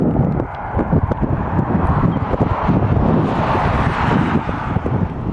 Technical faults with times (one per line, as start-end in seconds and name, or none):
none